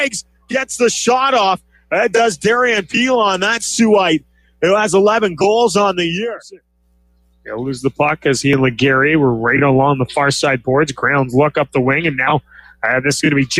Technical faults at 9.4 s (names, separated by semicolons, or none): noise suppressor applied to music or sounds